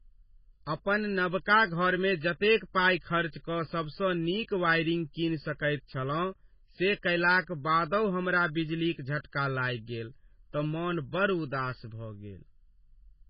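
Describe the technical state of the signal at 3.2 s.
At 3.2 s the speech carries channel delay (comb filtering), present throughout the clip. One channel runs behind the other by roughly 0.7 ms, and the two are summed to mono. Components shared by both cancel at evenly spaced frequencies. The first notch sits near 700 Hz, with further notches repeating above it. The notches stay fixed. The result is a hollow, phasey colour on the voice.

The same moment also has heavy codec damage, present throughout. Nothing comes through above 5.5 kHz. The treble stops at a hard ceiling. The sound is watery and swirly, with metallic chirps on s sounds and smeared attacks. This likely comes from MP3 compression. That codec drops weak frequency lines that flicker on and off between frames, and it cuts the top at a fixed point. The damage fits a very low bitrate, around 16 kbps.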